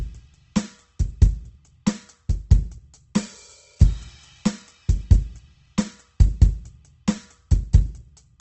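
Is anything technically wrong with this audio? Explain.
Yes. Opus compression affects this music throughout. It likely comes from Opus in its CELT music mode at a very low rate, which fits something around 16 kbps. With too few bits, bands are filled by folding or with noise, so tones turn grainy, rough and noisy. A spectrogram shows a hard ceiling near 8.2 kHz with nothing above it.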